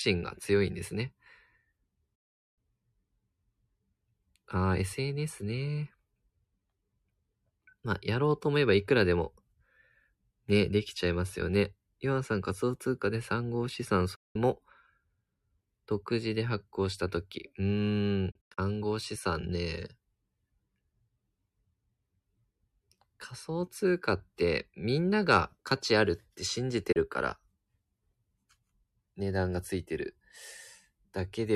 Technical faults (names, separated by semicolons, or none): digital broadcast dropout